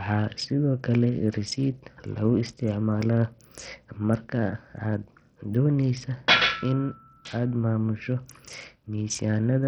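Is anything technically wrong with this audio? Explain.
Yes. Bluetooth SBC compression, running the whole clip, is the likely cause of heavy codec damage to this speech. With too few bits for the upper sub-bands, the treble drops out and flickers, while coarse quantisation leaves gritty noise and aliasing. The heaviness fits a low bitrate around 64 kbps.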